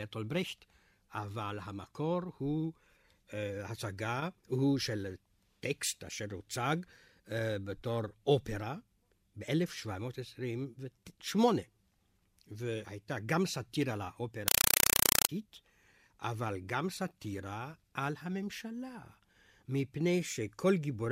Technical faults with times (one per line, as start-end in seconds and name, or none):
14.48-15.29 compressed stream played as audio